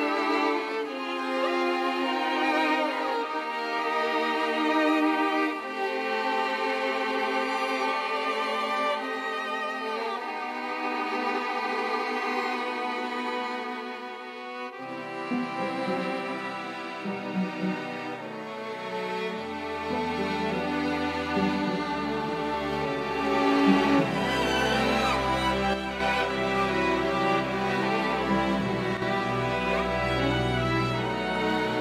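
One channel drops out from 25.74 to 26.00 s and again from 28.97 to 29.02 s: the level falls abruptly by about 6 dB and recovers just as suddenly, likely because one stereo channel briefly went silent before the mono sum.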